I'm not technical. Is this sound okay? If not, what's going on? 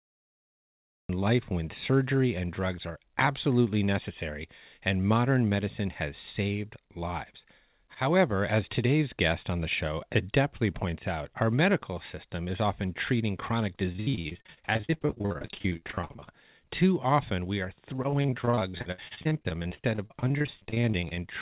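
No. The recording has two problems.

First, a cut-off start. The recording began late, so the first second or so, up to about 1.09 s, is silent. Then the speech comes in abruptly in the middle of a sound, right before "life when surgery and", with no natural lead-in. It sounds as if someone hit record a moment too late, so the opening is clipped off.

Second, repeated packet loss, which gives a robotic sound. The audio travelled over a call connection, and small pieces kept getting lost or arriving too late, dozens of times in a row. Each time, the system patched the hole by stretching the last bit of sound, and the next hole followed almost at once. This happens from 13.92 to 16.29 s, just after "is often treating chronic", where nearly half of that stretch is patched-in sound. It happens again from 17.96 to 21.19 s, after "often we are", where about a third is patched. In both places the speech turns choppy, with pieces missing. 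Each gap is short, the longest only about 60 ms, but they come so close together that the voice breaks up.

The call line itself carries nothing above 4 kHz, which is why the whole recording has a narrow, telephone-like tone.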